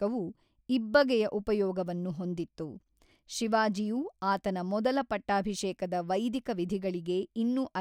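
No technical faults can be heard in this speech recording.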